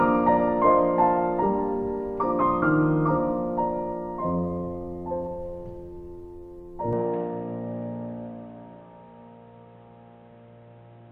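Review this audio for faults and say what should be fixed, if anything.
From 6.93 s to the end the sound abruptly turns dull and boxy, with nothing above 3.9 kHz, a level shift of roughly 5 dB, a new faint noise floor and no gap. That points to an input switched to a poorer device, likely a fallback microphone or headset profile. On a spectrogram the upper band is cut off flat at the switch, and the waveform steps in amplitude there. Lock the recording input to one device so the system cannot switch mid-session.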